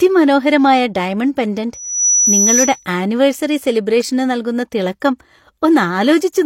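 Speech, with a loudspeaker feedback squeal from 1.73 to 2.86 s: a single tone near 5.9 kHz swells over roughly a third of a second and then holds a little above the speech level. A microphone was picking up the loudspeaker it fed, and the loop's gain passed one at that frequency. The swell from nothing is what separates it from a steady interfering whistle or tone, which would appear at full strength.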